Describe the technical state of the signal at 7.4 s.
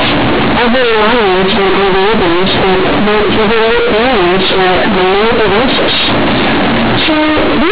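At 7.4 s, as throughout the clip, A-law companded audio is read as linear 8-bit samples without expansion, flattening quiet and loud alike into loud, buzzy distortion with heavy noise in pauses.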